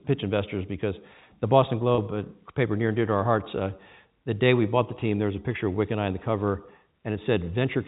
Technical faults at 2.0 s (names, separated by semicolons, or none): packet loss with pitch repetition